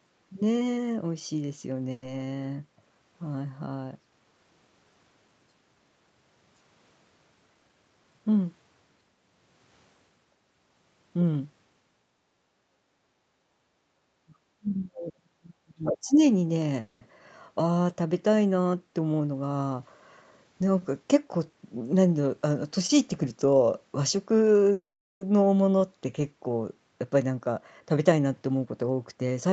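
At 1.91 s the speech briefly stretches into a smeared buzz for about 110 ms, then resumes exactly where it left off with nothing skipped. This is a call audio freeze: packets most likely arrived late, the jitter buffer emptied, and the receiver extended the last sound until data returned. Two more follow. At 16.81 s there is a 200 ms hold. At 24.73 s the fill fades into about 390 ms of silence within a 480 ms pause. Each one inserts delay without losing any of the speech.

Between 12.87 and 13.97 s the room background dips three times. The first two, at 12.87 s and 13.22 s, are shallow, about 6 and 5 dB, lasting roughly 40 and 50 ms. The third, at 13.72 s, is deeper at about 17 dB and lasts roughly 300 ms. This is background gated by the echo canceller: while the loudspeaker played, the canceller clamped the microphone, and the ambience came back once it released.

From 14.25 to 16.17 s the talker's speech sinks and breaks up over roughly two seconds, at its worst falling by about 40 dB. 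This is speech suppressed in double talk. Both ends were likely speaking at once, and the echo canceller, unable to separate the local voice from the loudspeaker echo, attenuated everything it picked up.

Inside that stretch, at 15.86 s, a short fragment of a second voice surfaces for about 120 ms, only about 5 dB below the talker. This is the other side's voice leaking through, most likely residual loudspeaker echo that the canceller failed to remove from the microphone signal.

Three passages sound rushed while keeping the same pitch. From 18.98 to 19.50 s and again from 20.17 to 21.01 s the speech plays at about 114% speed. From 27.04 to 29.49 s it runs at about 111%. This is jitter buffer speed-up: with more audio queued than its target, the receiver trimmed pitch-period-sized slices to catch up. Roughly 70 ms, 100 ms and 300 ms are removed across the three stretches. Throughout the clip the Opus call codec limits the audio to nothing above 8 kHz.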